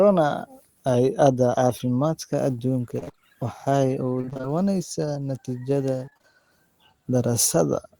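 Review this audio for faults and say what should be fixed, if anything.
Short concealed packet loss at 1.77–1.81 s: about 20 ms of speech arrived too late to play, and the receiver covered it by extending the preceding sound before crossfading back. The patch leaves a brief smear in the speech. A larger jitter buffer or forward error correction would prevent it.

Repeated packet loss (robotic sound) at 2.99–3.19 s, 4.21–4.45 s and 6.05–6.25 s: in each stretch, gaps of up to about 25 ms recur, and roughly half of the span is concealment rather than real speech. The constant patching makes the speech choppy, with pieces missing. Fixing the network path's burst loss, with redundancy or retransmission as a fallback, would prevent it.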